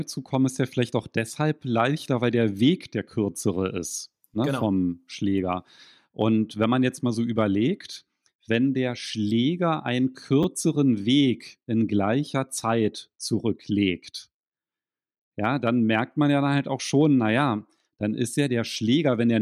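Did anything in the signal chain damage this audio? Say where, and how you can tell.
Yes, at the driver or buffer stage. From 10.43 to 10.45 s the speech gives a brief buzzing click: one short piece plays three times with hard joins, which fits a 10 ms buffer replayed twice when fresh audio arrived late. Essentially no audio was lost.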